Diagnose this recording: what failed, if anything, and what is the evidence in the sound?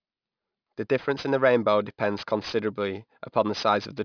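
Aliasing from the sample-rate conversion stage affects the whole clip. Sibilants in the speech sound gritty and metallic, with spurious tones folded down below 5.5 kHz at roughly 20 dB under the signal. This fits a drop to about 11 kHz with no anti-aliasing filter, so high-frequency content reflected into the passband.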